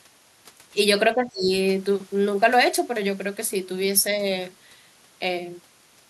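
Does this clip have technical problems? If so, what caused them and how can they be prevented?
Yes. From 1.14 to 1.51 s the speech is pulled down by roughly 25 dB at its deepest, for about 0.4 seconds in total, and then recovers. This sounds like speech suppressed in double talk, likely caused by an echo canceller that could not separate the talker from the loudspeaker echo while both sides spoke, so it attenuated everything. Using full-duplex echo cancellation with better double-talk detection prevents it.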